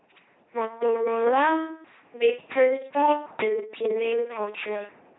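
Throughout the speech, heavy LPC-10 vocoder damage gives a buzzing, robotic tone with hiss bursts at voicing errors and nothing above 3.9 kHz, consistent with 2.4 kbit/s coding.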